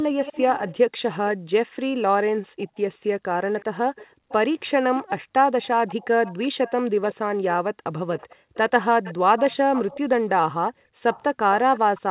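An echo leak, likely from a far end whose echo canceller failed to remove what its loudspeaker fed back into its microphone, runs from 0.23 to 0.77 s. The speech returns as a faint copy 370 ms late, around 15 dB down.

From 0.87 to 2.77 s the room sound is gated by the echo canceller. It clamps the microphone while the loudspeaker plays, so the background drops by up to about 40 dB in short dips totalling roughly 0.7 s, then springs back.

The echo leak returns from 2.61 to 7.15 s, the same 370 ms late and about 20 dB below the speech.

Within and just after that stretch the gated background dips again from 4.07 to 5.33 s, about half a second in all, and from 6.81 to 8.54 s, near 0.4 s in all, each time by up to about 40 dB.

A third echo leak spans 8.17 to 12.01 s, again 370 ms behind and about 15 dB down. One last gating dip of about 0.3 s falls between 10.71 and 11.04 s. All of it sits in narrowband audio with nothing above 4 kHz, as expected from G.711 A-law.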